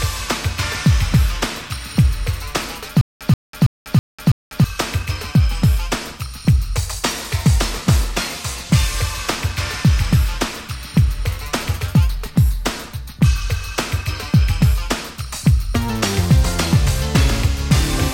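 From 3.01 to 4.64 s a 131 ms burst repeats five times, each followed by 195 ms of digital silence, a steady 326 ms cycle. This stutter with silent gaps likely comes from a stalled stream replaying its last fragment at each retry, losing the intended audio.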